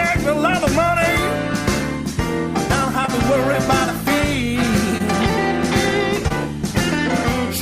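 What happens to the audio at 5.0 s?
A brief smear or wobble passes over the sound from 4.98 to 5.02 s. This is short concealed packet loss: about 20 ms of audio arrived too late to decode, so the receiver extended the preceding sound to cover the gap, then blended back into the real signal.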